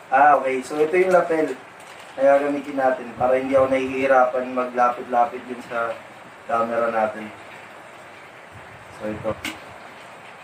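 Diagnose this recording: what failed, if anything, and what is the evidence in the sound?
The failure is in the codec stage: damaged data in a compressed stream. Four brief blips, each about 20 ms long, break into the sound at 0.33, 2.56, 5.6 and 9.31 s. Each is heard as a short chirp, squawk, click or hole. Corrupted bytes in the encoded stream make the decoder misread the affected frame, lose frame sync and hunt for the next valid header, emitting a fragment of garbled output before it recovers.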